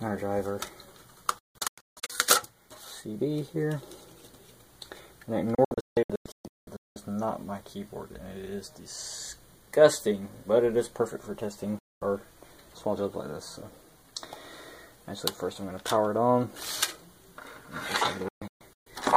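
The audio keeps dropping out in a way that points to a digital broadcast dropout: the receiver is losing lock or rejecting corrupted frames and muting until clean ones arrive. It happens four times. From 1.39 to 2.10 s there's a cluster of short holes, about 0.51 s missing in total, with the longest gap 160 ms. From 5.55 to 6.96 s it's the worst patch, nearly a second gone and one gap of 192 ms. At 11.79 s there's a single clean 224 ms cut. From 18.28 to 18.87 s about 0.38 s is lost, with the longest gap 128 ms. Each mute snaps in and out over a 3 ms fade, so it sounds like hard cuts rather than dips, and whatever was sent in those gaps never comes back.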